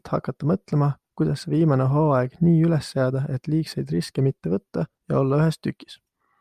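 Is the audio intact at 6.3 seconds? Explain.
Yes, at 6.3 seconds the audio is intact, with no dropout, click, distortion or other fault at that point.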